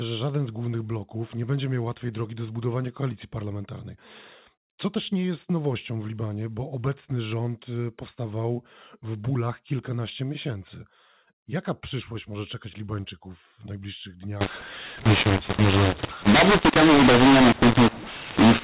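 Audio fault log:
14.41–18.63 s: mu-law and A-law mixed up. The final stretch of the speech was coded with G.711 mu-law but is being decoded as A-law, so each 8-bit code is read against the wrong logarithmic curve. Sample levels land in the wrong places, some too loud and some too soft, which makes the speech harsh and distorted. The quietest samples are pushed well above silence, so the pauses fill with noise. Before 14.41 s the same mu-law telephone coding decodes correctly.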